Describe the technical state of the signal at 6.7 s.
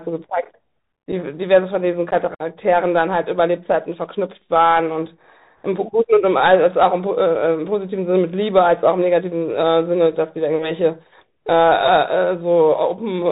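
At 6.7 s the speech carries Bluetooth CVSD headset codec damage, present throughout the clip. One-bit delta modulation caps the band near 4 kHz, so the sound is muffled. Where the adaptive step lags, sibilants turn scratchy over a granular hiss, consistent with a 64 kbps link.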